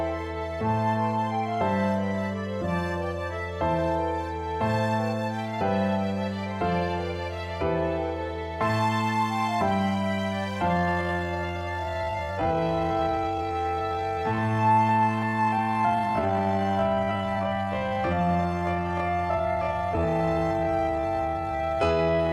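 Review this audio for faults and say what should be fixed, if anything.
From 10.71 s to the end at 22.32 s there is a time-stretched section. The pace drops abruptly to 0.53 times normal speed, but the pitch holds steady. The slowed audio drags. This likely comes from software padding the length by repeating short pieces. To prevent it, fit timing by trimming or editing the material instead of stretching it this far.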